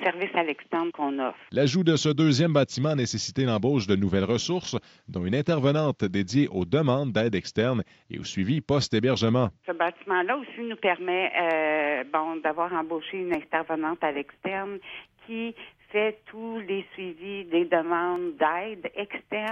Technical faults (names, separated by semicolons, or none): input switched to a poorer device